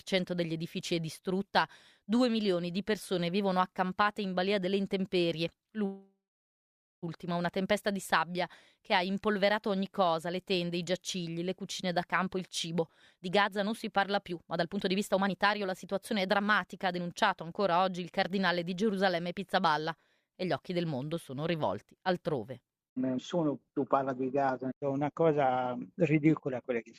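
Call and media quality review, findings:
Call audio freeze, 5.85 to 7.05 s. Last sound stretched into a fading buzz or hiss, then 0.84 s of silence. Nothing lost afterward. Likely jitter buffer underrun from delayed packets. Inserts 1.17 s, adding that much delay.

Jitter buffer speed-up, 12.23 to 21.53 s. Audio hurried, about 113% speed, pitch unchanged. Receiver repeatedly cutting short pitch-period segments to shrink an over-full buffer. Roughly a second trimmed.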